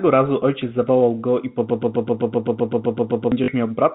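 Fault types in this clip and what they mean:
Broken-record loop: from about 1.70 to 3.32 s a 128 ms slice of the speech plays over and over, thirteen times back to back, and whatever should have come in that stretch is lost. It's likely a stalled player or stream resending its last fragment.
Packet loss with last packet repeated: at 3.44 s there's a 40 ms hole patched by replaying the previous chunk, which fits two lost 20 ms packets, so you get a quick, robotic stutter.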